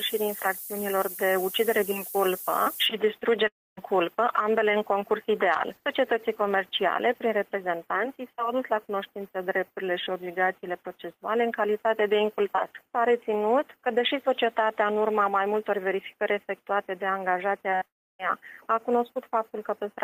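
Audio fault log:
0.00–2.86 s, low bit depth with noise shaping: A steady, thin hiss sits only about 10 dB below the sound and climbs sharply toward the top of the band. The audio is carried at roughly 5 bits, with the rounding error pushed upward in frequency.
3.47–3.79 s, long network dropout: The sound smears on briefly as a fading buzz or hiss, then falls to silence for about 0.25 s before returning further along. About 300 ms of audio never arrives, most likely from a network outage, and concealment covers only the start.
17.71 s, short concealed packet loss: A brief smear or wobble interrupts the sound for about 20 ms. That slice never reaches the decoder in time, so the receiver extends the preceding sound for about 10 ms and blends it back into the returning audio.
17.76–17.83 s, burst of packet loss: The sound holds as a buzz or hiss that fades over about 50 ms, then jumps ahead. 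Around 60 ms of consecutive audio is lost, and the receiver stretches the last sound while lowering its level.
17.85–18.30 s, long network dropout: Right after the burst, the sound trails off as a decaying buzz or hiss and then goes silent for about 0.28 s before resuming further on. About 340 ms of audio is missing, and a likely network outage leaves the receiver nothing to play.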